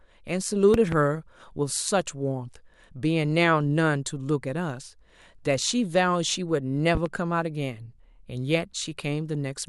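Right at 0.74 to 0.96 s there's a loud pop, actually two quick pops, jumping well above the speech, and a milder double pop hits at 6.95 to 7.09 s. Each is likely a voltage spike from a plug, switch or static, with the speech carrying on underneath.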